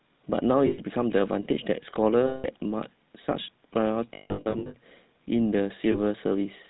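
Throughout, the speech carries the damage of the GSM full-rate codec. Nothing above 4 kHz survives. The vocal tract is modelled and driven by sparse, evenly spaced pulses, so voices sound buzzy and gravelly. The roughness is plainly audible and fits a 13 kbps rate.

Lost GSM frames break in at 0.66 to 0.81 s, 2.26 to 2.47 s, 4.14 to 4.75 s and 5.92 to 5.98 s. Each gap repeats the last good frame, giving a rough, metallic ring. The 4.14 s span is scattered, with its longest run about 150 ms.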